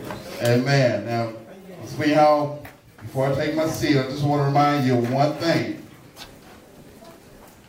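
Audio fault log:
No technical fault can be heard anywhere in the signal.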